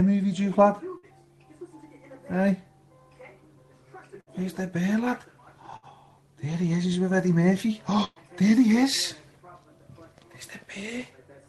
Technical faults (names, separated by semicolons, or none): burst of packet loss